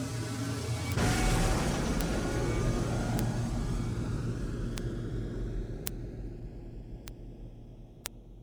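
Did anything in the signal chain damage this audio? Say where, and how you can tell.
Yes, bit error spikes from a digital link or memory: single sharp ticks at 0.92, 2.01, 3.19, 4.78, 5.87, 7.08 and 8.06 s, peaking around -20 to -8 dBFS, each a flipped bit jumping one sample or a few.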